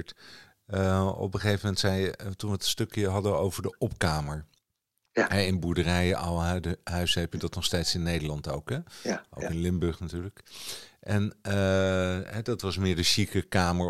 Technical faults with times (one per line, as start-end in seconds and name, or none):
none